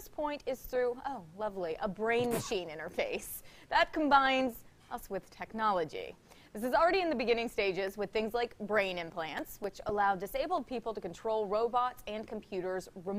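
CD scratch ticks occur from 8.88 to 9.89 s: five brief clicks, about five per second, the longest only a few milliseconds. A blemish on the disc corrupted more data than error correction could repair once per rotation, so the player patched or muted those samples.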